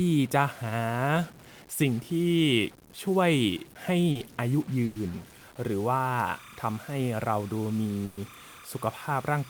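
Speech throughout carries distortion, and the pauses between phrases are filled with a gritty noise floor instead of falling quiet. That combination points to a stuck bit, likely one converter or data line held at a fixed value, so roughly half the samples are offset by that bit's weight and low-level signal turns into noise. A short concealed packet loss at 4.11 to 4.17 s leaves a brief smear where about 40 ms of audio never arrived and the receiver extended the preceding sound to bridge the hole before blending back in. A burst of packet loss follows at 4.85 to 4.97 s, with about 100 ms missing. A second burst at 8.05 to 8.19 s loses about 120 ms. In both, the last sound is stretched into a held buzz or fading hiss and the speech resumes further along, with the section in between gone. From 6.14 s to the end, a chirping warble sits behind the speech, switching between tones near 1 and 2 kHz at roughly 30 dB below the signal. 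This is timecode bleed, with linear timecode leaking in from an adjacent track or cable, and its rhythm fits 30-frame code.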